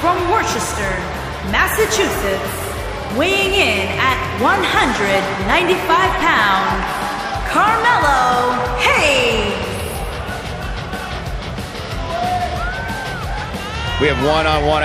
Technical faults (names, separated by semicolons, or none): none